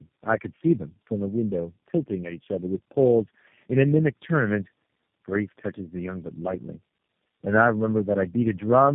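Throughout, tandem speech coding: re-encoding through several speech codecs in turn compounds the damage, leaving speech rough, muffled and warbly. The spectrogram shows nothing above 3.5 kHz.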